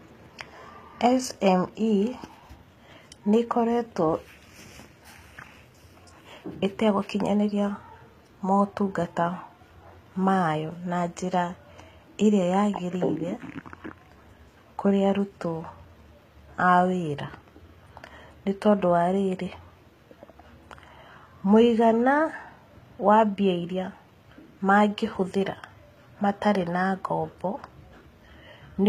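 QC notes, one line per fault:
Throughout: HE-AAC compression, likely the cause. The coder keeps only the lower part of the spectrum as real signal and regenerates the treble from copies of lower bands, shaped by a coarse envelope. At this plainly audible level of damage, which fits a bitrate around 20 kbps, the top end sounds synthetic. Sibilants come out gritty and lispy, harmonics fail to align across the crossover, and nothing is present above 14.8 kHz.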